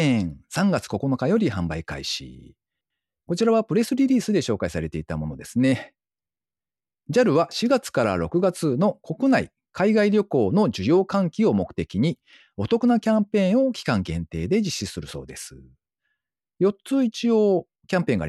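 Nothing technical stands out in this speech recording; I listened all the way through and didn't catch any faults anywhere along the way.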